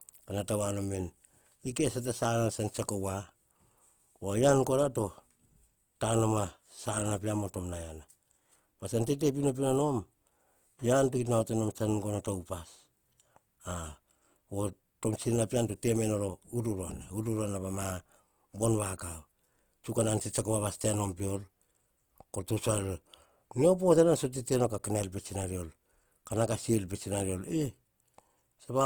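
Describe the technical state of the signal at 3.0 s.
At 3.0 s, as throughout, the speech sounds rough and grainy, likely from Opus compression: CELT mode fills bit-starved bands with noise, consistent with roughly 24 kbps.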